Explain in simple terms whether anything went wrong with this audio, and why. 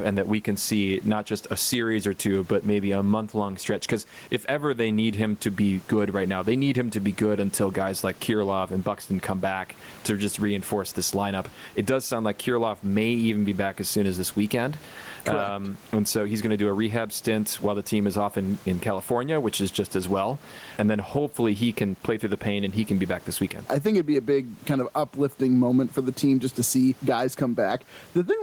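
From start to end, the speech sounds squashed, with loud and soft parts ending up closer in level. That is gain pumping, most likely from the microphone level set far too high, with an automatic limiter pulling it down hard on louder sounds. The quiet room noise itself is normal.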